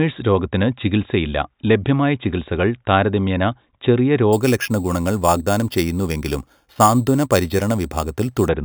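From 4.33 to 8.48 s, imaging from sample-and-hold upsampling adds a metallic fizz that tracks the speech: a mirrored spectrum at 4 to 8 kHz, about -17 dB, which fits an 8 kHz original rate.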